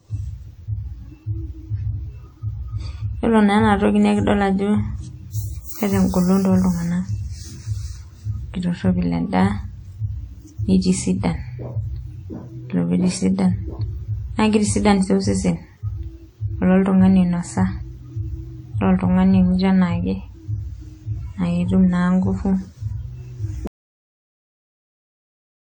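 Throughout, the speech carries the first encoding's coding artefacts despite a high bitrate, with nothing above about 20.1 kHz. This is low-bitrate audio saved at a high bitrate, likely 48 kbit/s WMA re-encoded as 256 kbit/s MP3. Unlike genuine high-bitrate encoding, the first codec's damage remains. At 23.67 s the speech cuts off abruptly into silence that lasts to the end. This audio dropout to silence likely comes from a lost input. Unlike a fade or noise gate, it leaves no room tone at all.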